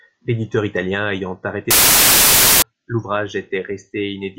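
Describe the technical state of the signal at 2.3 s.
Samples built from the wrong bytes cover 2.3 s, running from 1.71 to 2.62 s, starting just after "italien ayant". The reader assembles each sample from misaligned or misordered bytes, so the rapidly fluctuating low-order bits land in the high-order position and dominate every value. The speech is replaced by loud, harsh broadband noise across that span, close to white on the louder sounds.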